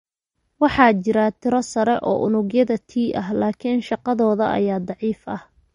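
Speech with MP3 compression audible throughout: the top end stops sharply at about 11.1 kHz, and the damage is plain, with weak spectral detail dropping in and out between frames. That points to a low bitrate, likely an MP3 encode around 46 kbps.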